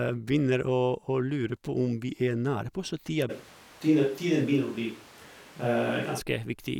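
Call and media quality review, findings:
Speech turns roomy and hollow with a thinner low end from 3.31 to 6.19 s, changing abruptly at both edges. Level stays roughly the same. Room noise rises to around 25 dB below the speech. Likely a switch to a distant microphone: the close-mic feed dropped out and a farther pickup captured more reverberation and ambience.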